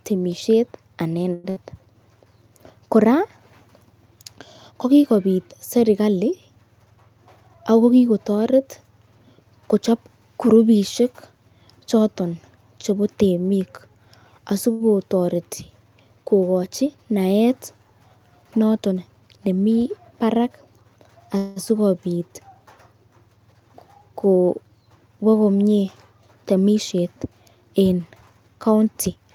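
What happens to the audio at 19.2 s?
A jitter buffer speed-up runs from 18.86 to 19.47 s, covering 19.2 s. The receiver's buffer had built up more audio than its target, so it trimmed the backlog by cutting out short slices a pitch period or a few long, over and over, about a tenth of a second in all. The speech plays at roughly 113% speed with its pitch unchanged, so this stretch sounds briefly rushed.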